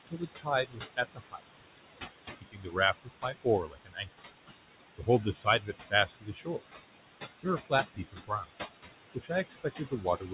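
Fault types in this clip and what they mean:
noise suppressor artifacts: Background noise is pushed down by about 17 dB throughout, so it sinks between phrases and swells under the speech. That frame-by-frame pumping sets it apart from the steady room noise itself, which sits only about 9 dB below the speech.
speech cut by the noise suppressor: In five stretches, from 0.07 to 1.41 s, 2.37 to 4.09 s, 4.98 to 6.62 s, 7.43 to 8.46 s and 9.15 s to the end, the suppressor mistakes speech for noise and pulls it down by about 18 to 21 dB, leaving soft consonants and word endings swallowed. This differs from the call codec's constant cut above 4 kHz, which dulls everything evenly.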